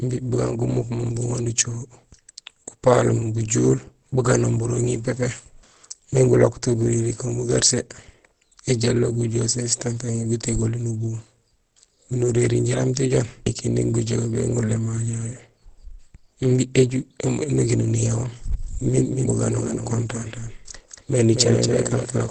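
From the first second the speech has that muffled, hoarse quality, and there's nothing above about 8.5 kHz, so the top end is simply gone. That's most likely Opus compression running in its speech-oriented SILK mode at wideband, which fits a low rate of around 16 kbps. At that budget the encoder trims the bandwidth and models the voice coarsely, and the damage is plainly audible the whole way through.

Then at 18.62 s a doubled audio track kicks in and runs to the end. A second full copy of the speech appears abruptly, trailing by roughly a fifth of a second and sitting somewhat quieter, about 5 dB down. It has no decay and no room colour, so it isn't an echo. It's the same signal laid in twice, likely from a slower second capture path or an edit that left two copies out of step.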